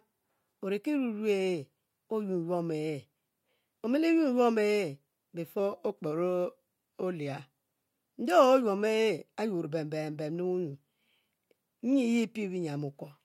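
A speech recording in which, from 5.59 to 7.89 s, the sound abruptly slows by 5.47% and drops 97.4 cents, close to a semitone, then snaps back to normal speed and pitch. That is likely a drift correction step, where clock-matching software briefly changed the playback rate to rebalance its buffer.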